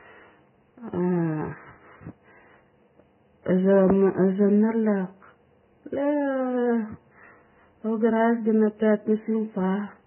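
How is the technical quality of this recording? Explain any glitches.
Technical quality is poor throughout. Heavy codec damage runs the full length of the speech, most likely Vorbis compression at a very low rate, consistent with something near 9 to 10 kbps. The encoder removes everything above 3 kHz, so the treble is gone. The band that remains is quantised so coarsely that its fine detail turns into noise of similar energy. The result sounds hissy and grainy, with roughened tones and smeared consonant onsets. On a spectrogram, energy stops at a hard shelf at 3 kHz, and blotchy, speckled patches appear below it. The waveform shows softened attacks.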